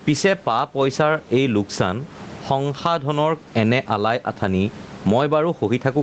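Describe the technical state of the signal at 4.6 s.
At 4.6 s the speech shows gain pumping, present across the whole clip. The level swings by around 20 dB. The speech sounds squashed, with loud and soft parts closer in level. The likely cause is excessive input gain reined in by a fast limiter.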